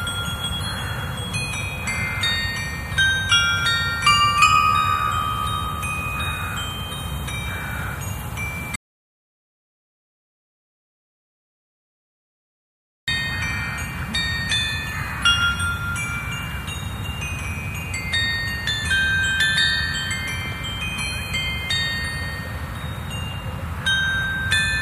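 From 8.76 to 13.08 s an audio dropout to silence leaves about 4.3 s of total silence, with no room tone, unlike a fade. The input was likely lost while recording continued.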